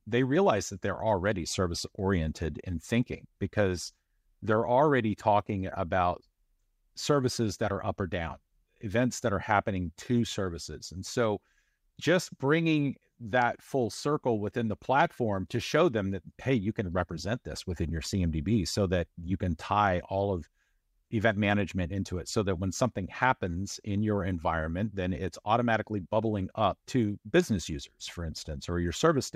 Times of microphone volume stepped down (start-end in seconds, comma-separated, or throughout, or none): none